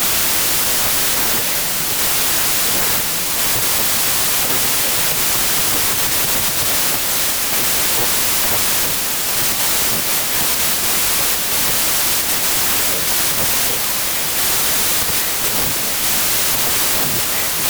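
Throughout, a wrong sample width corrupts the speech: packed 24-bit data read as 32-bit splices bytes across samples. Loud noise buries a voice running 1.33 times too fast and high. The spectrogram shows a broadband wash over faint, raised harmonics, and the waveform stays dense and large.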